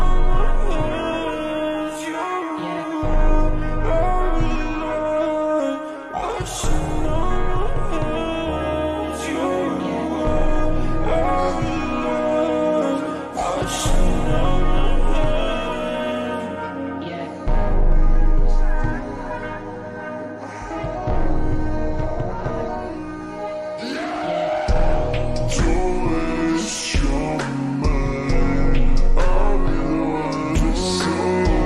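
From 0.0 to 4.0 s the audio plays as an adaptive stream starting at a low bitrate. The player opened on a cheap rendition to begin quickly, and the sound points to something like HE-AAC at around 20 kbit/s: dull, with treble that is thin or synthetic and stronger codec smearing. At 4.0 s it steps up, apparently to AAC-LC near 96 kbit/s, improving abruptly with no gap. The stepped-up sound still has nothing above 14.9 kHz.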